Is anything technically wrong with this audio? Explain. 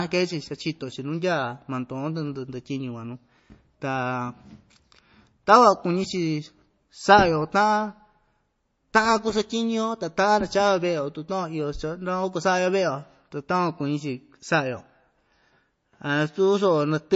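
Yes. Throughout the speech, the sound has a hard ceiling at 7.7 kHz and a watery, swirling texture, likely from MP3 compression at a low bitrate of around 33 kbps. Short of bits, the encoder discards the treble and drops weak frequency lines that flicker between frames, smearing consonant attacks.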